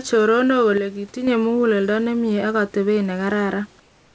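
From 0.78 to 1.27 s the level falls abruptly by about 6 dB, and anything present only on the lost side disappears. This is one channel drops out, likely a lost stereo channel, so only the content of the remaining side survives the mono sum.

From 3.80 s to the end at 4.15 s, the room background, which sits about 35 dB below the loud parts, gives way to a steady, featureless hiss about 3 dB quieter. This is comfort noise in place of the background, likely discontinuous transmission halting during the pause, with the receiver synthesising noise shaped like the room.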